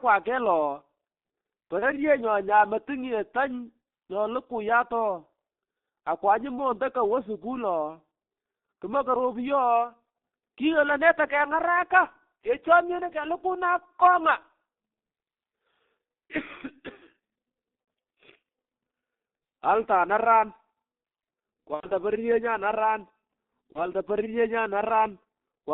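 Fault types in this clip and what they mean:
G.723.1 codec: a low-rate telephony codec, here around 6.3 kbit/s, squeezing the speech into a 200 Hz to 3.6 kHz band in 30 ms frames. Heavy damage throughout: the speech sounds muffled and hoarse, with consonants smeared and indistinct.
VoIP packet loss concealed by the speech codec: lost packets were filled by extrapolating the previous frame's pitch and filter at falling gain. Single 30 ms losses near 1.79, 17.84 and 23.72 s, and a 90 ms loss at 21.74 s, each come through as brief buzzy or noisy smearing.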